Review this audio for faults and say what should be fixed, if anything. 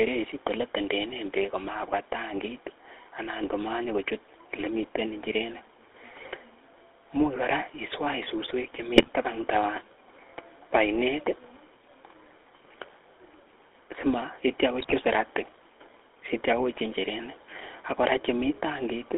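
The whole recording carries the GSM full-rate codec's buzzy, gravelly texture. Excitation is reduced to regular pulses and the line is band-limited to roughly 300 Hz to 3.6 kHz, which fits 13 kbps full rate. Route or capture the audio over a wideband or lossless path instead.

GSM bit errors break the speech into squawks and gargling from 8.96 to 9.09 s and again from 14.8 to 14.95 s. Corrupted filter, pitch and gain parameters distort several consecutive frames, which suggests a weak radio link. Improve signal strength or use stronger error protection and concealment.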